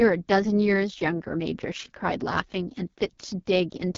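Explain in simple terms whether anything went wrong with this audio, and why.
Yes, something went wrong: the whole clip has passed through the AMR wideband (HD Voice) codec at one of its lowest settings, so the speech sounds rough and raspy from start to finish. The codec rebuilds voices from a simplified model, and there's nothing above about 7.4 kHz, which dulls the top end.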